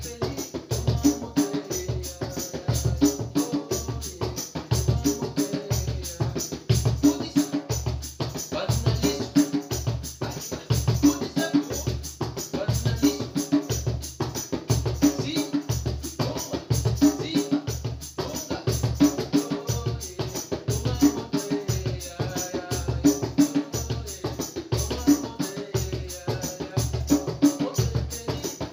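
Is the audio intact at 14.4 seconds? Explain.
No. A repeated buffer occurs at 14.36 s. New audio arrived late, so a 1.33 ms piece played twice, which fits a 64-sample buffer. The hard joins give a click or brief buzz.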